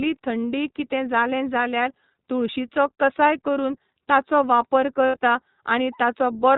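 iLBC codec, throughout: band-limited to 4 kHz, the speech sounds plainly rough and synthetic, consistent with iLBC's 15.2 kbps mode coding each 20 ms frame independently.

Lost iLBC frames, 5.06 to 5.17 s, just after "कसाय करून ताचो वापर": a brief held, buzzy vowel where the decoder repeats the last pitch cycle with noise, fitting four lost frames.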